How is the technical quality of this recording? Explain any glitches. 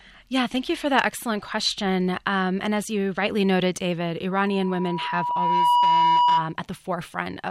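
The recording has one clear fault, a loudspeaker feedback squeal. From 4.31 to 6.56 s, a tone near 972 Hz rises out of the speech. A microphone is picking up its own loudspeaker, and the loop gain at that frequency exceeds one. The tone swells over about a second and a half. It ends up slightly louder than the speech.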